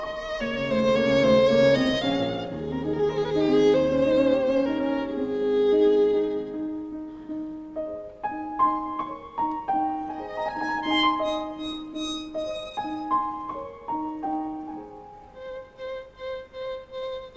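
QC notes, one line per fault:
No faults are heard anywhere in the clip. It has come through a call path whose codec leaves nothing above 8 kHz, which fits G.722 wideband coding.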